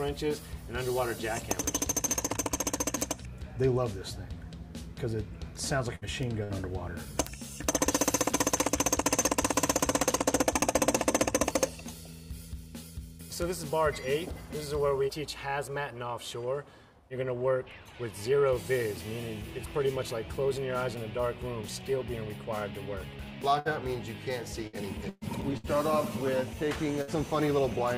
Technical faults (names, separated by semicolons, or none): bit error spike; burst of packet loss